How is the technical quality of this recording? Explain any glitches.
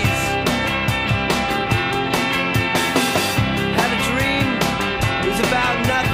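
Nothing stood out on listening, and there are no glitches to explain.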